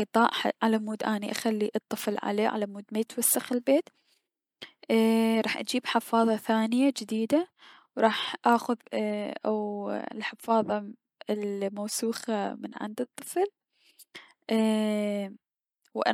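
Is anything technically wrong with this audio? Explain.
No, nothing is technically wrong.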